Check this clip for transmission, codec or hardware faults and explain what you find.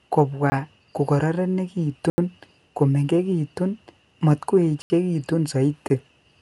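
Two faults are present: a dull, band-limited coding sound throughout the speech, and four short dropouts to silence.

Throughout, the speech sounds muffled, with nothing above 11.5 kHz and a rough, fluttering noise around voiced tones. The likely cause is Dolby Digital compression at a low rate, around 64 kbps: the encoder narrows the band and leaves many frequency lines without mantissa bits, so the decoder fills them with noise.

At 0.50 to 0.52 s, 2.10 to 2.18 s, 4.82 to 4.90 s and 5.88 to 5.90 s, the sound cuts out abruptly. The 20 ms gaps are brief and the 80 ms gaps are heard as short holes. Each is a block of digital silence: a run of samples replaced by zeros, with no fade.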